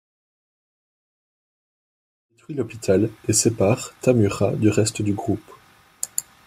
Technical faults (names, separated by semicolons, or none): none